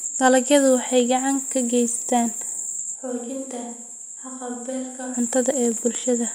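From 2.97 s to 5.13 s the speech jumps to a distant microphone, likely because the close microphone's feed dropped out. It turns abruptly hollow and roomy, thinner in the bass, and falls by roughly 10 dB, with room noise rising to roughly 35 dB below the speech. Unlike a plain level dip, the tone changes as well, and both edges are sudden switches.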